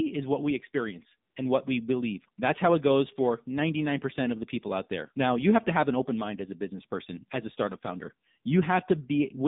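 Throughout, the speech carries the AMR narrowband mobile codec. Nothing sits above 3.7 kHz or below about 150 Hz, and the vocal-tract model, driven by sparse pulses, gives the voice a plainly audible buzzy, synthetic edge. That degree of damage fits a low mode near 7.4 kbps.

From 1.30 to 1.36 s, between "is what we experience" and "and what we believe", AMR comfort noise replaces about 60 ms of transmitted signal. The pause is filled with smooth, steady synthetic noise instead of the real background, which switches in and out abruptly.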